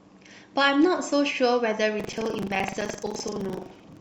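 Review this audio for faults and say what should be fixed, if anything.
Buffer tearing runs from 1.96 s to the end at 4.00 s: a rattling buzz at 23.4 Hz over the speech, which fits a 2048-sample buffer. Writer and reader have slipped, so roughly a fifth of each buffer replays audio about a tenth of a second old, hard-joined on both sides. Prevent it by keeping the write pointer locked a safe margin ahead of the hardware read position.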